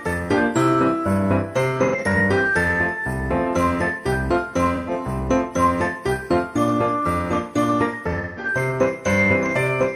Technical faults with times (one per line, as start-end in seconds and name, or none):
1.84-2.19 AAC frame loss with concealment
4.75-4.90 AAC frame loss with concealment
8.11-8.48 AAC frame loss with concealment